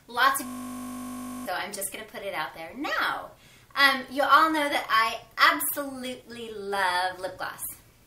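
From 0.46 s to 1.46 s the audio locks into a system hang loop: a single 20 ms slice of the buffer replays exactly, 50 times, while the host stalls and the output hardware keeps cycling the same memory. Because the slice is so short, it reads as a steady 50 Hz buzz rather than a stutter. About a second of real audio is lost. What separates it from a dropout or plain glitch is that perfectly identical repetition at a fixed rate.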